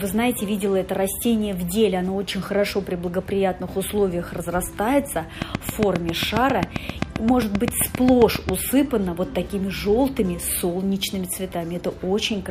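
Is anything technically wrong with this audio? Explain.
Yes. From 5.42 s to 8.50 s a train of clicks sits over the sound: about twenty sharp, near-identical pulses at a steady 7.5 per second, peaking roughly 20 dB above the programme level. The even spacing and uniform shape point to a repeating external pulse rather than content, likely interference from nearby equipment or a faulty connection or power supply. It is heard as a regular ticking that stays audible through quieter stretches as well.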